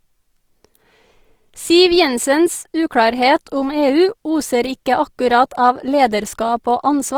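Throughout the speech, Opus compression damage is plainly audible: the encoder's music mode likely ran short of bits, around 24 kbps, and filled bands with folded or noise content. Harmonics turn grainy and rough, while the band still extends to about 20.4 kHz.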